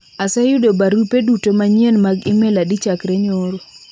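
No technical faults can be heard in this recording.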